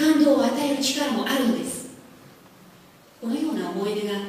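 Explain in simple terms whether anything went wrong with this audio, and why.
Sample clock jitter runs through the whole clip. The converter's timing wobbles by a few millionths of a second, so samples land slightly early or late. That adds a hiss or roughness that grows on loud, bright moments and disappears in quiet gaps.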